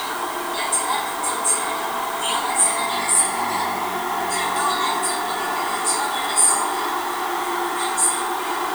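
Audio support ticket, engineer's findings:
Constant, even hiss under the sounds, start to end of the clip. No crackle, no grit on loud passages. Symptom matches low bit depth with dither. Noise sits roughly 15 dB below the signal, which points to about 6-bit resolution. Probable component: requantisation stage in the export or conversion path. Mechanism: dither added before coarse rounding turns the quantisation error into steady white noise instead of distortion.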